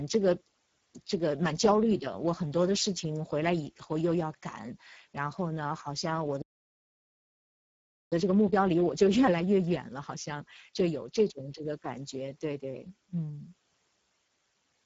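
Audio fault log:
throughout: Speex codec. The speech is plainly hoarse and grainy, with a buzzy edge, because this CELP coder has too few bits to model the excitation, which points to a low-quality setting of roughly 10 kbps. On a spectrogram, harmonics look smeared and noisy, the region between about 4 kHz and 7.7 kHz is a diffuse noise-like wash rather than clear structure, and there is nothing at all above 7.7 kHz.
6.42 to 8.12 s: playback stall. The sound cuts off mid-flow and the output sits silent for about 1.70 s before resuming. The likely cause is a player that ran out of buffered data or had its output thread blocked until it recovered. On the waveform this shows as an abrupt drop to a flat, near-silent line with no fade. On the spectrogram it appears as a clean, fully empty vertical band across all frequencies.
8.12 to 11.12 s: time-compressed catch-up. Right after the gap, the speech runs hurried at about 1.1 times normal speed but keeps its normal pitch. 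The player is shrinking its backlog by dropping small slices and cross-fading across the joins. On a spectrogram, syllables and pauses look horizontally squeezed while harmonic spacing stays unchanged, and the joins can show as slight discontinuities in the harmonic tracks.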